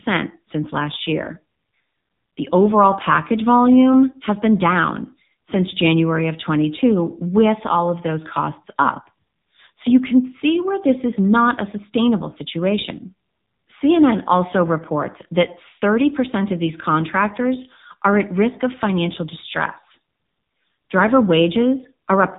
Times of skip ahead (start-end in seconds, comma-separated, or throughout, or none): none